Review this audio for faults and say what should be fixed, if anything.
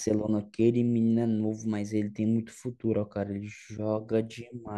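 No technical faults can be heard in this speech recording, so nothing needs to be fixed. No prevention step is called for.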